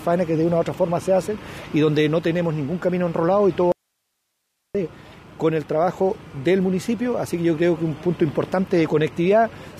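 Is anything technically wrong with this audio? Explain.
Yes. From 3.72 to 4.75 s there is an audio dropout to a faint residue: the wanted signal was likely lost upstream while the path stayed live. For about a second the sound cuts abruptly to hiss roughly 55 dB down, then snaps back.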